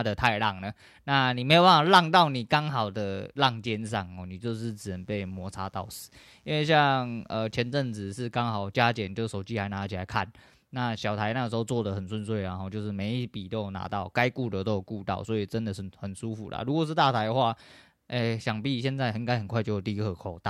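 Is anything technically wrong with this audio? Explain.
Yes. From 4.62 to 8.11 s, a faint mains buzz sits well beneath the speech: 60 Hz switching spikes spray harmonics into kilohertz, giving a raspy edge rather than a smooth, pure hum.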